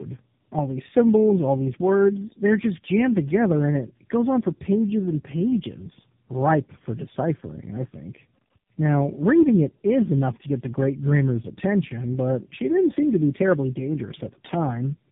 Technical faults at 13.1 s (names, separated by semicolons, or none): tandem speech coding